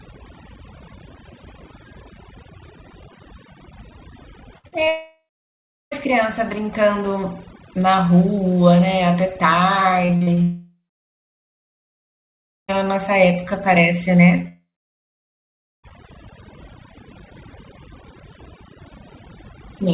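Speech passed through a narrowband call path with nothing above 4 kHz, and it shows four faults. Overdone noise removal runs throughout: the background drops and breaks up into twinkling specks, unlike codec band-limiting, which dulls without flickering. Repeated packet loss gives choppy, robotic bursts at 4.58–4.88 s and 10.05–10.39 s, with several short patched holes rather than one long gap. Long dropouts follow at 4.88–5.93 s, 10.43–12.70 s and 14.48–15.85 s, where a fading buzz or hiss gives way to silence; these are likely network outages. Short concealed packet loss leaves brief smears at 14.36–14.40 s and 14.42–14.46 s, each a few hundredths of a second.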